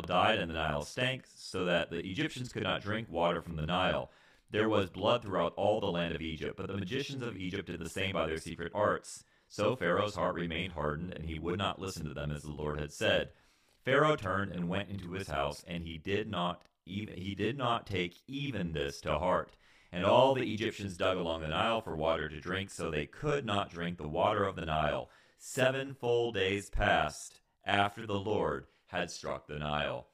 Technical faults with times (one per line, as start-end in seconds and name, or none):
0.00-30.13 channel delay (doubling)